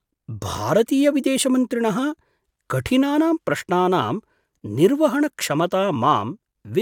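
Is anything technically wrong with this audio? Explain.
No, nothing is technically wrong with this audio.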